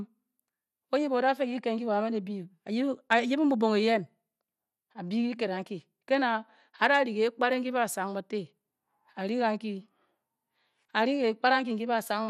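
From start to finish the speech carries plainly audible coding damage, likely from MP2 compression. Nothing is present above 14.4 kHz, and the top end sounds dull because the encoder has switched off its highest sub-bands. The bands that remain are coarsely quantised and flicker in and out, which gives the voice a gurgling, granular texture. That degree of damage points to a low bitrate, in the region of 80 kbps.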